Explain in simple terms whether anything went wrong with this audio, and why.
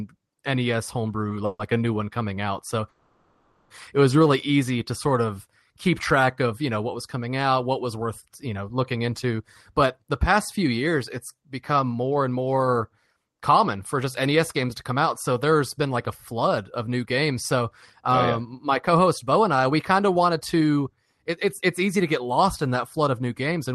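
Yes, three kinds of trouble from a call connection can be heard, all in how the speech was delivered over time.

Short stall from a late packet: at 1.29 to 1.32 s, one small piece of audio arrived late and the receiver had nothing ready to play. It stretched the last sound by about 20 ms until the piece came in, then carried on from the same place. Nothing is lost, but that moment is held a touch too long.

Call audio freeze: the likely cause is that several pieces of audio were held up in transit, leaving the receiver with nothing to play. At 1.45 to 1.75 s it stretched the last sound for about 140 ms, including a brief silent stretch of about 30 ms. At 2.89 to 3.71 s a longer hold-up of about 810 ms brings a fading, smeared sound. Each time the speech resumes where it stopped, so a pause is inserted rather than anything going missing.

Jitter buffer speed-up: the receiver had more audio stored than it aims for and trimmed tiny slices out of the speech to catch up. 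Between 9.37 and 15.87 s it plays about 8% fast, dropping around half a second in total. It happens again at 16.32 to 17.62 s at about 6% fast, at 18.09 to 22.29 s at about 7% fast, and at 23.17 to 23.59 s, also at about 7% fast. The pitch stays the same, but the speech sounds slightly hurried.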